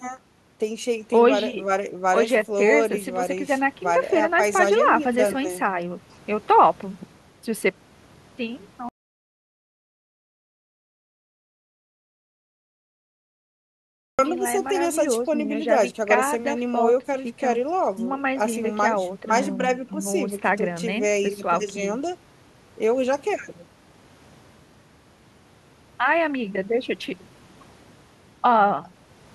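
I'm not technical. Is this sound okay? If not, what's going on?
No. The audio input was likely lost for a while, an audio dropout to silence, so from 8.89 s to 14.19 s the speech cuts to complete silence for about 5.3 seconds.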